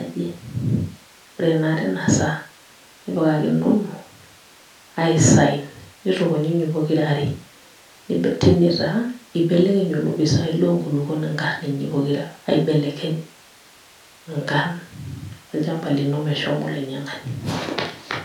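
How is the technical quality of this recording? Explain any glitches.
No technical faults are audible.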